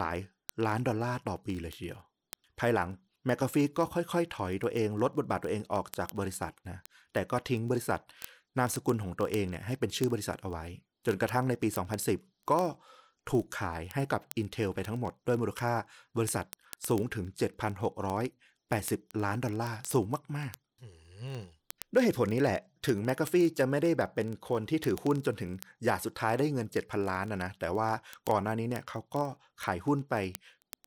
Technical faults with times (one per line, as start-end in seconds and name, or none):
0.11-30.86 word clock ticks